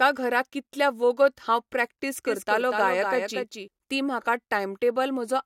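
Doubled audio track from 2.26 to 3.68 s, after "हांव प्रॅक्टीस": a dry copy, likely from a slower path, trails about 200 ms behind, roughly 5 dB quieter, starting and stopping abruptly.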